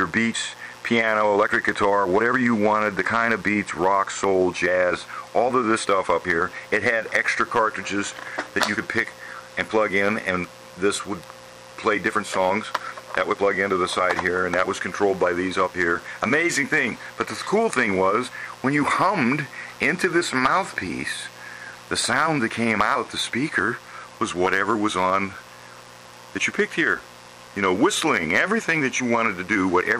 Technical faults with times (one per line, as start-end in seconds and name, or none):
0.00-30.00 mains buzz
0.00-30.00 hard clipping